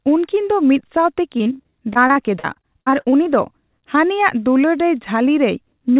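From 1.38 to 3.27 s the speech breaks up through repeated packet loss, giving a robotic sound. Sixteen gaps arrive in quick succession, the longest 57 ms. Each is patched by stretching the previous sound, so about a quarter of the stretch turns choppy.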